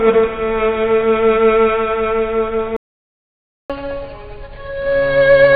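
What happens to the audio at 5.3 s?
At 5.3 s you're in a catch-up at higher speed, running from 3.70 s to the end. After a stall, the player resamples its backlog at 1.25x, so everything rushes and sits roughly four semitones sharp.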